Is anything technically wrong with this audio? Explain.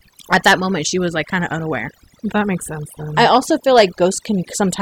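Yes, there's overdone noise removal running through the whole clip. A noise reduction stage was pushed too hard on noisy speech, so any frequency band sitting close to its noise estimate gets pulled way down or switched off, and the softer parts of the voice get caught along with the noise. You hear it as a background that drops and breaks up into little twinkling specks.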